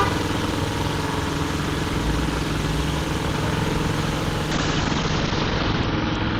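At 4.52 s there's a call bitrate drop that lasts to the end of the clip. The encoder falls from about 32 to 11 kbps, stays at the floor for 1.34 s, and its bandwidth narrows from 20 kHz to 6 kHz, so the sound turns coarse and dull.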